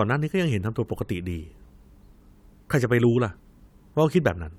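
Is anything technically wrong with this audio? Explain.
No, nothing technically wrong turns up here; this speech recording holds together with no faults to point to.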